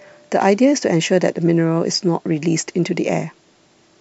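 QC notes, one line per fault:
No faults found on this speech clip.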